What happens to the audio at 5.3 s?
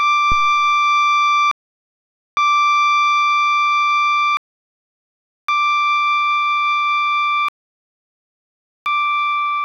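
The music is silent here, then picks up exactly where it stopped: a rebuffering stall from 4.37 to 5.49 s, as playback ran out of downloaded audio, adding about 1.1 s.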